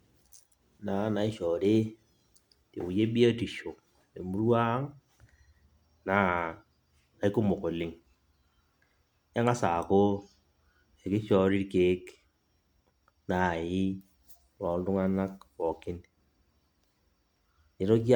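Throughout the speech there is generation loss: swirling, hollow smearing and blurred consonant attacks, likely from repeated MP3 re-encoding, around seven passes, consistent with 128 kbit/s. A spectrogram shows a hard ceiling at 19.9 kHz, speckled holes through the upper bands, and softened onsets.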